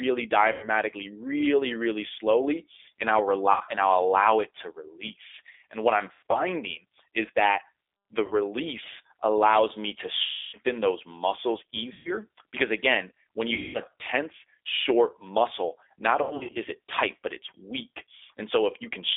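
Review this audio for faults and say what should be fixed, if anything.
The whole clip carries G.729 codec damage. The band runs only from about 300 Hz to 3.6 kHz, and the speech sounds rough and synthetic, as it does when rebuilt from a filter, pitch predictor and sparse pulses at a rate that fits 8 kbit/s. A spectrogram shows a hard ceiling near 3.6 kHz and smeared harmonics. To prevent it, use a wideband codec such as G.722 or Opus.

VoIP packet loss concealed by the speech codec occurs at 0.52–0.68 s, 3.52–3.63 s, 6.13–6.42 s, 8.26–8.34 s, 10.23–10.57 s, 11.93–12.16 s, 13.54–13.80 s and 16.23–16.57 s. The lost audio runs from 40 ms to 300 ms, and the 10.23 s gap is the longest. At 6.13 s and 16.23 s the losses are scattered over 200 ms and 320 ms. The decoder stretches its last pitch and filter into a buzzy tone or a coloured noise that fades, and the speech stays weak briefly after packets return. 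On a spectrogram the gaps appear as flat, repeated harmonic bands. On a waveform they appear as periodic, decaying stretches. To prevent it, add a jitter buffer, forward error correction and QoS prioritisation on the network path.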